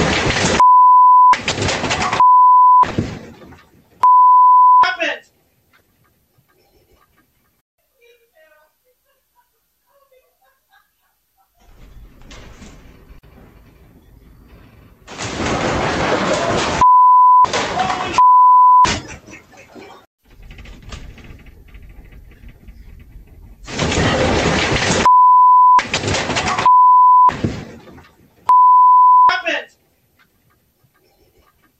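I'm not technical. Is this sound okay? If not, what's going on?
No. There are two corrupt frame decoded faults, at 2.88–2.91 s (the louder one) and 5.78–5.81 s (much fainter): damaged data played anyway as a brief glitch, not a plain click.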